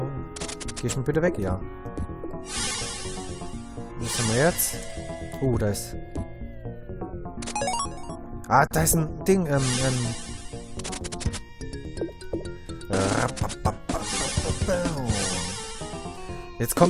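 At 8.67 s to 8.71 s there is a gap at a join of encoded pieces. The continuous sound drops out for about 37 ms and then resumes from where it stopped. The audio was encoded in separate pieces and joined without trimming. The end of one piece kept its padded last frame, and the next kept its encoder start-up delay. The codec smears the gap's edges, so the silent part sounds shorter than the full gap.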